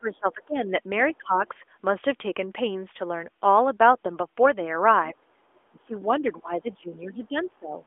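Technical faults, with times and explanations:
0.0–0.6 s, 1.18–1.54 s and 5.7–7.76 s: speech suppressed in double talk. The speech sinks by roughly 20 dB, then 15 dB, then a deep 25 dB in the long final stretch. The likely cause is an echo canceller ducking its own talker while the far side spoke.
5.15–5.27 s: background gated by the echo canceller. The room sound drops by about 14 dB for roughly a tenth of a second. The canceller clamps the microphone while the loudspeaker plays. It then lets go, and the room sound comes back.
5.55–5.6 s and 7.41–7.46 s: other side's voice leaking through. Short scraps of a second voice sit under the speech. The first is roughly 40 dB down and the second roughly 25 dB down. The likely source is loudspeaker sound the echo canceller did not fully remove. Both scraps are confined to the narrow 300 Hz to 3.5 kHz line band.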